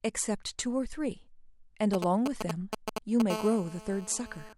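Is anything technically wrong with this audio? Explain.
Yes. Two related radio-interference faults from a nearby 2G handset occur in this speech recording.

From 1.94 to 3.22 s there are GSM signalling bursts: a galloping dit-dit-dit of ticks and brief buzzes, roughly as loud as the speech itself. This is the pattern of a phone exchanging short control transmissions with the network, as happens ahead of an incoming call or message. Each group of radio pulses, repeating at about 217 Hz, is rectified by the audio circuitry and demodulated into audible clicks and buzz fragments.

From 3.30 to 4.53 s the interference becomes a continuous GSM phone buzz, about 12 dB below the speech. With the handset now in a call, it transmits its TDMA bursts without interruption at a rate of about 217 Hz. The audio path rectifies that pulse train into a steady, hard, raspy tone at 217 Hz with a dense series of harmonics. 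The buzz is nearly steady throughout this span and bears no relation to the speech underneath it.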